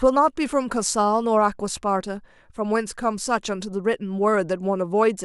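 Speech recording with no audible technical faults.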